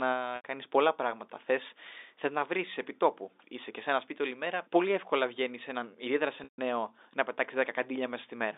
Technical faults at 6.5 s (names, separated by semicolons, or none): packet loss with pitch repetition